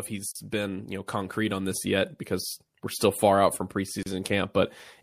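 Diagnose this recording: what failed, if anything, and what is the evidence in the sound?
The failure sits at the codec stage: the speech was encoded in separate pieces and joined without trimming, so one piece's padded final frame and the next piece's encoder start-up delay both remain in the stream. This produces a gap at a join of encoded pieces, a silence of about 33 ms from 4.03 to 4.06 s that cuts into continuous speech. Its edges are smeared by the codec, and the speech resumes exactly where it stopped.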